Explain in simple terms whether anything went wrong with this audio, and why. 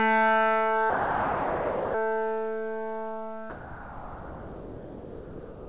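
Twice, the sound cuts out and is replaced by a steady, featureless hiss: from 0.9 to 1.94 s, and again from 3.5 s until the end of the clip. That pattern is most likely sound dropped by the voice detector. The sending side judged the audio to be mere background and stopped transmitting, so the receiver filled the gaps with generated comfort noise. The real sound in those stretches, about one second and then just over two seconds, is lost, heard through a call path that carries nothing above 4 kHz.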